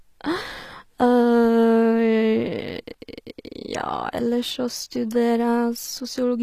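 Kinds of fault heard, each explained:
HE-AAC compression: The s sounds in the speech turn gritty and metallic, the treble is unnatural, and nothing reaches above 15 kHz. This is likely HE-AAC at a low bitrate, around 24 kbps, rebuilding the upper spectrum by copying lower bands upward.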